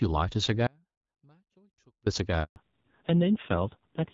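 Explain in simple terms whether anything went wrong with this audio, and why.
Three things go wrong here. First, an audio dropout to a faint residue: from 0.67 to 2.06 s, about 1.4 seconds, the speech cuts out abruptly and only a faint trace stays far below normal level. The likely cause is the signal being lost while the line stayed open.

Next comes a handover gap at 2.44 s. The speech stops dead for about 120 ms, to 2.56 s, as the phone switches the call to another network. Nothing gets through during that switch, so whatever was said there is simply gone.

Right after that, at 2.56 s, there's a fallback to narrowband. The call drops from HD Voice, which sounded fairly clean before, to an older phone codec. Everything above 4 kHz disappears, so the voice turns duller and rougher until the end.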